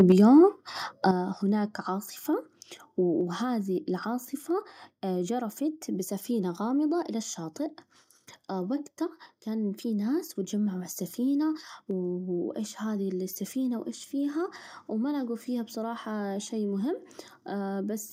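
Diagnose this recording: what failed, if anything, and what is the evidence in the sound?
Microphone overload at the converter stage, from 0.0 to 0.12 s: the opening peaks are flattened, driven about 3 dB past full scale, with roughly one sample in twenty clipped, giving a harsh crackle. Because it rides only the loudest moments, it sounds unlike smeared codec distortion.

Microphone volume stepped down, in call processing, likely automatic gain control reacting to that overload: the level drops abruptly at 0.12 s (about 4 dB), 1.11 s (about 8 dB) and 3.21 s (about 2 dB). The background falls together with the voice in single steps, which rules out a gate or a gradual fade.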